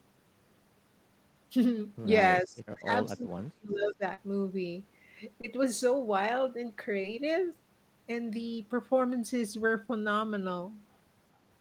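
Speech, and from 2.43 to 4.02 s the talker gets pushed down hard, about 35 dB at the deepest, for roughly a second and a half. That's likely speech suppressed in double talk, with the echo canceller mistaking overlapping talk for echo and ducking it. On top of that there's short concealed packet loss at 2.73, 4.13, 5.41 and 7.01 s. Each gap is about 20 ms, except 40 ms at 4.13 s. The decoder patches each one by stretching the preceding sound, so you get a quick smear or wobble there.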